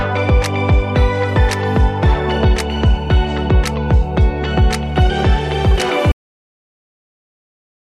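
At 6.12 s the sound stops abruptly mid-event into dead digital silence with no decay. This cut-off end means the final buffers were never written or played.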